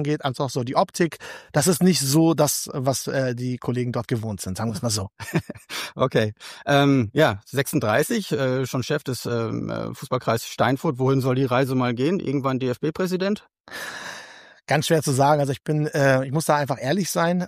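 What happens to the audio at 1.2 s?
Nothing goes wrong at 1.2 s; the audio plays through that moment intact, with no dropout, click or other disturbance.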